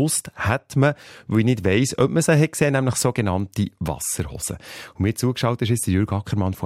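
Nothing is technically wrong with this speech recording.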